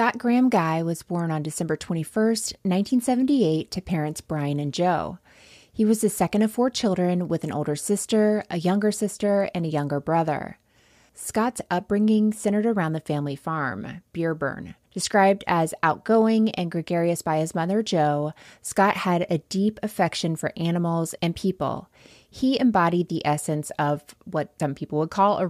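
No technical faults can be heard anywhere in the speech recording; the signal stays continuous and intact throughout.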